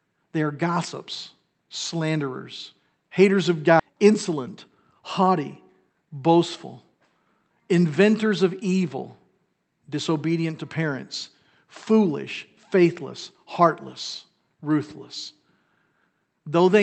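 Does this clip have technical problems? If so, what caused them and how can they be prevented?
Yes. Skip ahead at 3.79 to 3.81 s: roughly 0.7 s of speech is missing, and playback jumps forward with no filler. A stretch was lost in transit or discarded by an overflowing jitter buffer, so the audio on either side of the gap is spliced almost directly together. Preventing it means giving the jitter buffer enough headroom, and using packet-loss concealment or retransmission, so that late bursts are not thrown away.

Jitter buffer speed-up from 3.93 to 4.49 s at 105% speed, and from 5.02 to 6.07 s at 104%: having overfilled, the receiver trimmed repeated pitch-period slices, a few tens of milliseconds in total for each stretch, so the speech runs faster but keeps its pitch, and the first stretch sounds hurried. This Opus path at about 32 kbps, band-limited to 8 kHz, carried the audio. Steadier network delivery, or more gradual buffer adaptation, would keep these catch-up passages short and less noticeable.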